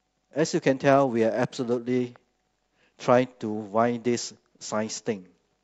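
From 0.92 s to 1.87 s the speech dulls and turns gritty, the sound of a Bluetooth SBC bit pool drop: the link congested and the encoder cut its bit budget, which fits a fall from a bit pool near 31 to about 12, roughly 88 kbps. The upper sub-bands lose their bits, so a spectrogram shows the treble cut off in that stretch, with coarse quantisation noise smeared across the remaining bands until the rate recovers.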